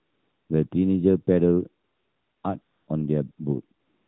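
It's a speech clip over an AMR narrowband phone link, and the pauses get swapped for AMR comfort noise: at 0–0.50 s, 0.70 s, 1.84–2.44 s, 2.62–2.88 s, 3.32–3.38 s and 3.80–4.08 s the real background drops out for smooth synthetic hiss, since no speech frames were sent.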